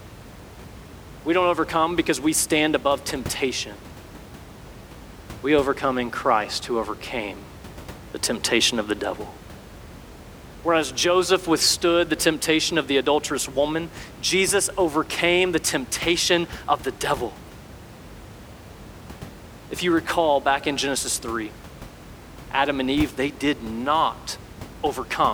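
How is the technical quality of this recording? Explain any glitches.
Nothing here counts as a glitch, just a bit of room noise sitting about 18 dB below the speech, which comes from the space the microphone was in rather than from the recording chain.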